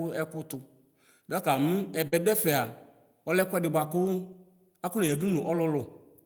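It's a short speech clip with two kinds of network trouble. Around 2.07 to 2.14 s there's a burst of packet loss: the decoder stretches the last bit of sound for about 45 ms, fading it into a held buzz or hiss, then roughly 40 ms of audio is simply gone before things pick up again. Right on the tail of that, from 2.12 to 2.18 s, you get lost packets rebuilt from error correction, about 40 ms where the decoder plays the low-bitrate backup copies carried in the following packets. There's no gap, but the sound turns grainy and noisier. The same rough, lo-fi texture shows up briefly at 4.04 to 4.06 s, one 20 ms frame, and again across 5.02 to 5.36 s, where about 180 ms in total gets patched in, likely from a string of separate losses that each had a backup copy to fall back on.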